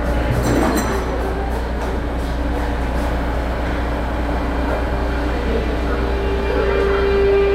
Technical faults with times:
none

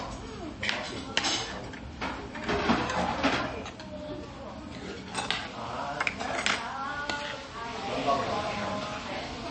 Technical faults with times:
0.00-9.50 MP3 compression

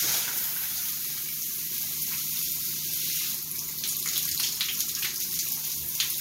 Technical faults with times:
0.00-6.20 mains buzz

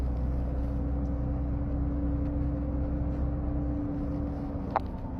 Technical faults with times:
0.00-5.20 HE-AAC compression

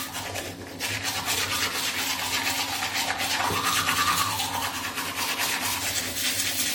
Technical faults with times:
0.00-6.74 generation loss

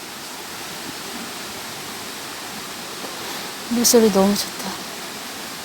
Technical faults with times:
none

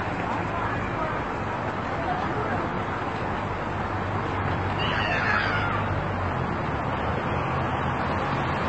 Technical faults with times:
0.00-8.69 transcoding between lossy codecs

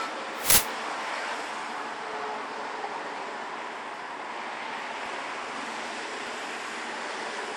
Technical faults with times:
0.00-7.57 generation loss
0.50-0.58 uninitialised buffer
2.14 dropped buffer (overrun)
5.06 dropped buffer (overrun)
6.27 dropped buffer (overrun)

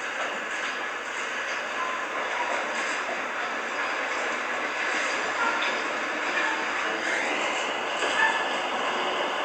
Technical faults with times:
none

